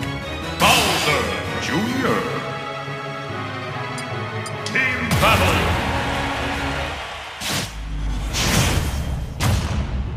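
No technical faults are audible anywhere in this audio.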